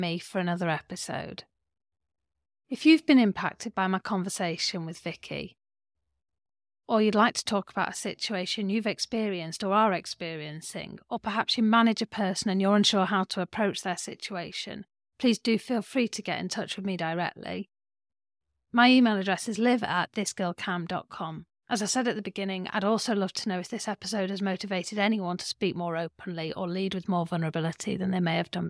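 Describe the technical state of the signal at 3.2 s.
The speech at 3.2 s is intact, with no dropout, distortion, glitch or other fault in the signal at that moment.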